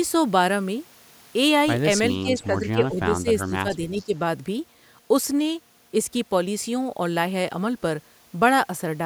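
A speech recording with two faults. Speech is suppressed in double talk from 2.23 to 3.0 s, 3.21 to 3.28 s, 3.48 to 3.69 s and 3.91 to 4.15 s. The voice dips by up to about 10 dB. The likely cause is an echo canceller turning down the talker while the far side also spoke. Echo leak appears from 2.42 to 2.46 s and from 4.0 to 4.05 s. These are faint scraps of the voice, delayed 402 ms and around 30 dB below the speech. They are likely residual loudspeaker echo that the canceller missed.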